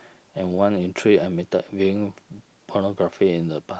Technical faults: none

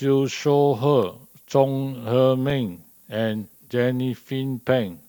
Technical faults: low bit depth with noise shaping; block of digital silence

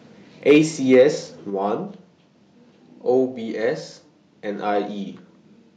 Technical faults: microphone overload; microphone volume stepped down

